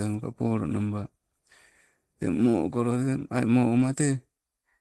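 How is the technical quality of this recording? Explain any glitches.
There's one glitch in this Opus call audio, whose top end stops around 12 kHz. At 3.77 to 3.87 s, a lost packet rebuilt from error correction: about 60 ms, roughly three 20 ms packets, was replaced by lower-bitrate backup copies, so there's no gap, just a brief rough, noisier patch.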